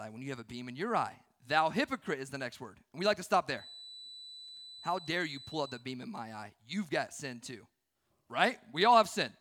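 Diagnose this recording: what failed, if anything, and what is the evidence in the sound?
A feedback whistle, a 4 kHz tone around 20 dB under the speech that swells and fades slowly, runs from 3.49 to 5.87 s as a thin horizontal spectrogram line, likely a loudspeaker-to-microphone loop held just below runaway in the analogue stage.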